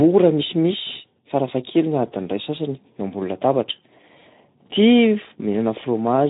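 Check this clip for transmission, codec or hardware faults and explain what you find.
One codec fault runs through the whole speech clip: Speex codec damage. From start to finish the speech sounds hoarse and grainy, with a plainly audible rough texture. Nothing is present above 3.8 kHz, so it also sounds muffled and band-limited. Speex is a CELP codec that models speech as a filter driven by an excitation signal. At a low setting, which here fits roughly 11 kbps, there are too few bits to code that excitation accurately, and the coarse excitation comes through as the roughness heard here.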